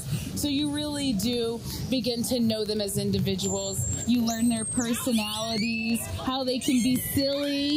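There's a steady train of word clock ticks running through the whole thing, from about 0.11 s to 7.75 s, roughly twenty a second, so around 150 in all. That pattern points to a digital link being read by a receiver on its own clock rather than locked to the sender, with the two clocks off by a few hundred parts per million. Each time they slip past each other, a sample gets dropped or repeated, and you hear a tick.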